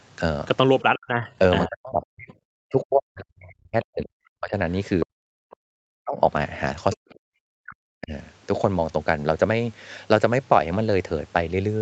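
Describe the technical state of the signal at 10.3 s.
At 10.3 s the speech is intact, with no fault to be heard, only the normal bandwidth of a call path, which carries nothing above about 8 kHz.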